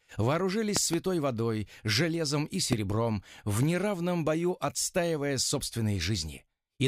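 Two loud pops sit on top of the sound, which carries on beneath them: a double pop between 0.77 and 0.96 s peaking about 20 dB above the signal, and a single pop from 2.73 to 2.75 s about 15 dB above it. Each is likely a voltage pulse from a plug, switch or static discharge. On a waveform they show as tall isolated spikes, and on a spectrogram as thin vertical broadband stripes.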